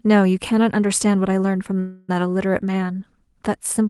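A call audio freeze runs from 1.79 to 2.10 s. For about 0.29 s the speech stops advancing and the last sound is stretched into a fading buzzy continuation, with no drop to silence. When the speech resumes it picks up exactly where it left off, so nothing is lost, but everything after arrives about 0.29 s later. The likely cause is packets stalling in transit until the jitter buffer drained, forcing the receiver to improvise filler.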